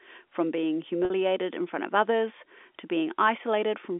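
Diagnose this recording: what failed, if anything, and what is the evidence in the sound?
A network fault dropped about 50 ms of the telephone-band G.711 stream at 1.05 s, consistent with five 10 ms packets. The receiver concealed this packet loss with pitch repetition, looping the last pitch period until 1.10 s, so the speech briefly holds on a buzzy tone.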